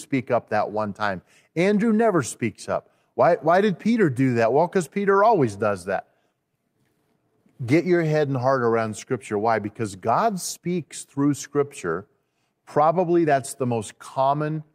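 Small hiccups recur through this speech recording at uneven intervals, from 0.13 s to 14.58 s. These are repeated timing corrections: the receiver keeps cutting short pieces to stay in step, all in the same direction, so the audio comes out at 104% speed. The cause is clock drift between sender and receiver, present through the whole clip. The sender's clock runs about 4 percent fast, so the jitter buffer keeps filling and the receiver trims material to hold its level.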